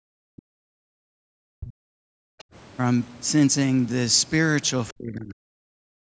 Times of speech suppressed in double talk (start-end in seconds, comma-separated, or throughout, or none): 0.00-1.01, 1.30-2.05, 4.92-5.37, 5.78-6.12